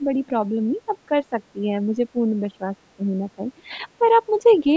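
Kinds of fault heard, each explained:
Speech suppressed in double talk: The talker's speech keeps dipping and thinning in short broken pieces. This happens from the start to 0.33 s, from 0.5 to 1.36 s, and over a long stretch from 1.53 to 4.03 s. A brief dip follows near 4.6 s. The drops reach about 10 dB early on and about 15 dB in the long stretch. The likely cause is an echo canceller turning the talker down while the far side was also talking.
Other side's voice leaking through: A faint second voice slips in for a moment around 4.51 s. It lasts only about 60 ms. It sits far below the talker, about 30 dB down, so it comes through as a scrap. This is likely far-end speech played on the loudspeaker that the echo canceller did not fully remove from the microphone. Right after it, near 4.6 s, the talker dips again by a few decibels.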